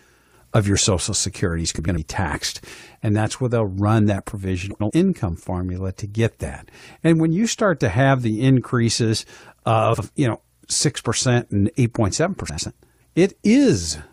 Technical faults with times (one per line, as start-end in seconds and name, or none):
1.79-1.98 frames out of order
4.71-4.91 frames out of order
9.93-10.04 frames out of order
12.49-12.69 frames out of order